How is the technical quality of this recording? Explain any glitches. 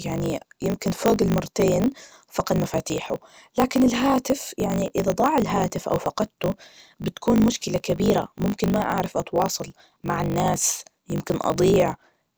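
The recording has a clear technical fault. Throughout, the speech carries a steady 50 Hz buzz and runs about 1.16 times too fast at near-normal pitch. That is a block size mismatch (truncated): each written block, which fits 1024 samples, is cut short when read.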